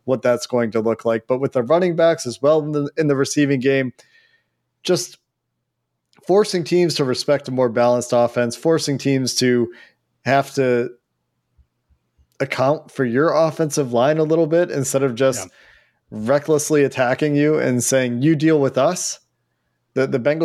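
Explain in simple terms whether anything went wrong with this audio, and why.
Nothing went wrong here: the recording stays technically sound throughout, with no audible glitches, breaks or distortions anywhere in the speech.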